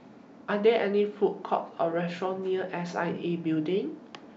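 Nothing in the speech stood out as a technical problem on listening.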